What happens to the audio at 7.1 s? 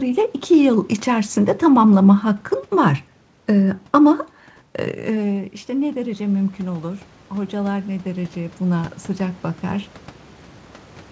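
At 7.1 s the voice and the room noise behind it are swelling together, slowly climbing in level rather than jumping. This is automatic gain rising, running from about 5.09 s to 9.93 s. Just before, around 5.0 s, the talker moves away and the level at the microphone falls by about 12 dB. The gain control hears the quieter input and gradually adds about 8 dB, lifting everything it receives, noise included.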